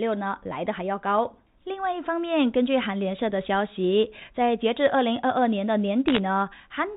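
From 6.08 to 6.18 s, near the end of the speech, there are bit errors on a digital phone line. The clip runs over G.711 telephone coding, so it carries the narrow band below 4 kHz of a fixed-line call. In this stretch, bits in the coded stream were flipped at a rate of around half a percent. Each flipped bit corrupts a single sample. The result is a short burst of ticks, a brief crackle laid over the speech.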